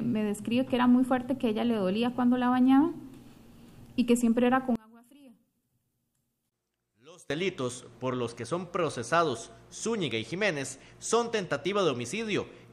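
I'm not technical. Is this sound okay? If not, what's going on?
No. From about 4.76 to 7.30 seconds the sound drops sharply and turns faint, as if most of it has been hollowed out, then returns to normal. The likely cause is one channel inverted: one side of the stereo signal is flipped upside down, so when the two sides are combined into one, everything they share cancels out. What remains is only the small difference between the two sides.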